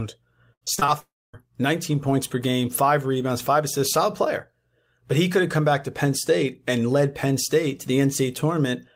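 A speech recording with two network faults close together near the start. From 0.53 to 0.90 s there is repeated packet loss, heard as a robotic sound. Five separate holes open up in that short stretch, the longest about 78 ms. Each one is patched by stretching out the preceding sound, so close to half of this span is synthetic fill rather than real audio. The fill gives it a choppy texture with fragments of the original missing. Just after, from 1.00 to 1.35 s, the signal gives way to a brief smeared continuation of the last sound that quickly decays. For roughly a quarter of a second after that there is only silence before normal audio resumes. Around a third of a second of material is simply gone, with no catch-up, which points to a likely long network dropout.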